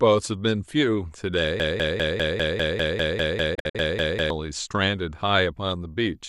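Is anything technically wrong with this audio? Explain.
Yes, two things. From 1.6 to 4.3 s there's a broken-record loop: a 0.2 s fragment repeats exactly, 14 times back to back, likely a stalled player resending its last buffer, so that stretch is lost.

Inside that, from 3.55 to 3.75 s, a digital broadcast dropout mutes with quick 8 ms fades. It's several short holes totalling 120 ms, the longest 48 ms, which points to a handful of corrupted frames.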